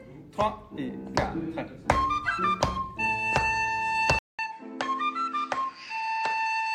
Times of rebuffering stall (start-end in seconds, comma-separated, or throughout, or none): none